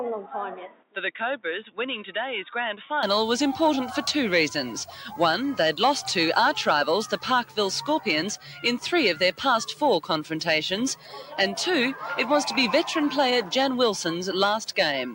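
For the first 3.03 s the audio is narrower in band and duller, about 5 dB quieter, and carries its own background noise roughly 30 dB below the signal. At 3.03 s it clears up with no gap at the change. This is likely an input switched to a poorer device. Unlike suppressor action, the tone and noise floor change together as a block and then snap back at one instant, rather than the level following the sound.

Throughout the clip, a noise suppressor applied to music or sounds keeps treating steady material as noise. Held parts and tails are pulled down while onsets pass, so the level swings by roughly 5 dB and the sound pumps. This differs from a compressor because the gain follows how steady the sound is, not how loud it is.

On top of that, the sound is cut by the noise suppressor in two places. From 0.68 to 0.96 s it dips by about 12 dB, over roughly 200 ms in total. From 10.95 to 11.32 s it dips by about 9 dB, over roughly 300 ms. 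These are deeper, local drops rather than the general pumping. They are also not dropouts: the sound sinks without going silent, and sudden parts still come through.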